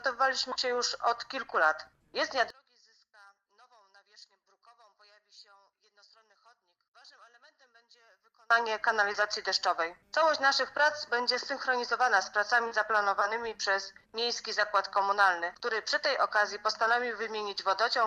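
From 2.50 to 8.50 s the sound collapses to a faint trace, about 33 dB down, which is likely one channel inverted: with one side's polarity flipped, everything common to both channels cancels when summed to mono, leaving only their small differences.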